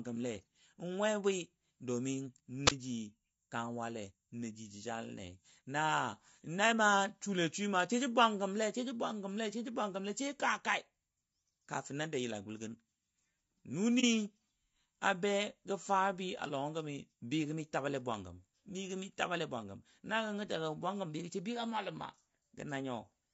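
Throughout the speech the voices sound rough and grainy, with noise filling the gaps between harmonics and a thin, synthetic top band. That points to low-delay AAC compression, likely AAC-ELD at a rate around 32 kbps, whose short frames resolve pitch poorly. Unlike a brief dropout, this damage never lets up.

From 2.66 to 2.71 s a wireless microphone squelch dropout occurs. Hiss swells as the radio signal fades, the receiver mutes for about 27 ms, and the voice comes back. That rising static before the hole sets it apart from a codec gap.

At 14.00 to 14.04 s there is AAC frame loss with muting. About 30 ms of spectrum is zeroed, which fits a single lost frame. The overlapping windows fade the sound out and back in, leaving a brief dip with no burst of hiss.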